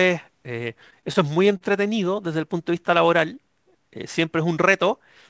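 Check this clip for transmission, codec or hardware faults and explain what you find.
One transmission fault is present: repeated stalls (stutter) between 0.80 and 1.63 s, heard through a call path whose top end stops at 8 kHz, which fits a G.722 codec at 64 kbps.

Packets reached the receiver late, so its jitter buffer ran dry seven times. Each time it extended the last sound for up to 39 ms, about 108 ms in total. No speech is lost, but the speech drags and stutters over that stretch.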